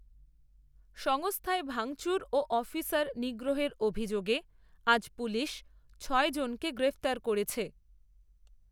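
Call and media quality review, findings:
Periodic USB or driver dropouts, 0.41–8.61 s: regular ticks about every 1.02 s, roughly ten across the speech. Tiny sub-millisecond skips, audio jumped rather than silenced. Waveform: small step discontinuities; spectrogram: thin vertical broadband lines at even spacing. Probable component: USB bus or audio driver stalled by background task.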